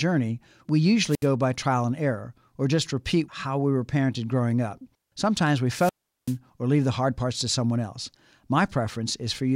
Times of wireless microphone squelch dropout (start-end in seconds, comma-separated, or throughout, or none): 1.08-1.28, 5.76-6.37